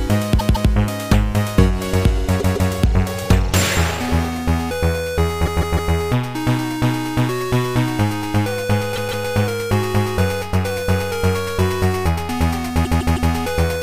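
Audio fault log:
0.38–0.69 s, 2.39–2.71 s, 5.45–5.92 s, 8.95–9.26 s, 12.84–13.31 s: repeated frames. A 157 ms block stutters, played two or three extra times (three at 5.45 s and 12.84 s), because the same run of compressed frames was decoded repeatedly, which fits a run of six frames.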